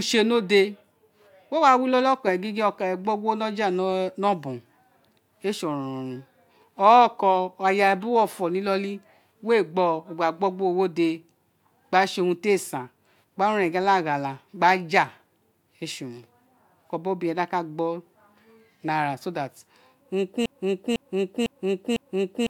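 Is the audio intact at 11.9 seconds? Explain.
Yes, the speech at 11.9 seconds plays through intact, with no audible fault at that moment.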